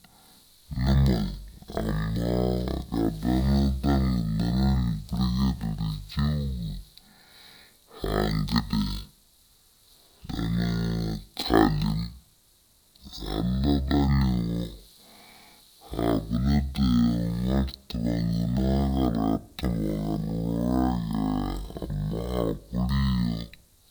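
Throughout this speech clip, stereo read as mono makes the audio run at half speed and a full octave (12 semitones) low, because interleaved left and right samples are played in sequence as one channel. Unlike a plain sample-rate mismatch, a fainter mirrored copy appears across the upper half of the spectrum.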